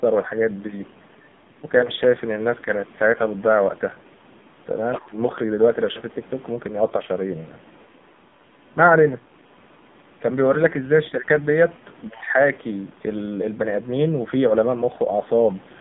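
Throughout, the speech has passed through the AMR narrowband mobile codec at a very low rate, which fits its 5.9 kbps mode. The line band runs only from about 150 Hz to 3.6 kHz, and the heavy coding leaves the voice buzzy, thin and synthetic.

From 5.92 to 6.00 s, lost AMR speech frames make the decoder fill about 40 ms of audio, which fits two lost frames. It repeats its last pitch and vocal tract settings at falling level, so the sound briefly warbles and dips before recovering roughly.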